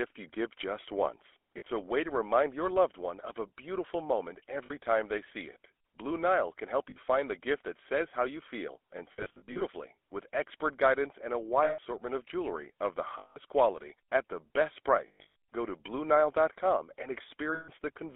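The whole clip of speech carries the GSM full-rate codec. The voice is buzzy and gravelly. Nothing sits above 3.5 kHz or below 300 Hz. The codec models the vocal tract and drives it with sparse, regular pulses, which fits 13 kbps coding.

Lost GSM frames follow at 1.58 s, 4.66 s, 6.9 s (after "can help", before "find the gift that"), 9.12 to 9.62 s, 11.64 s (before "of jewelry of the"), 13.18 s, 15.08 s (after "quality at the best") and 17.54 s. Each gap is filled by repeating the last good frame. That holds the sound as a rough, metallic ring. The gaps run 40 to 320 ms.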